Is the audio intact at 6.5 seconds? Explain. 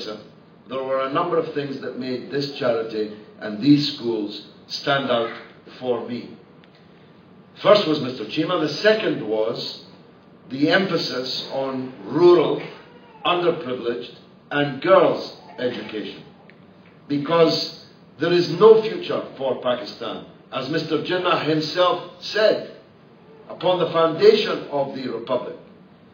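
Yes, at 6.5 seconds the audio plays through intact, with no dropout, click, distortion or other fault audible at that point.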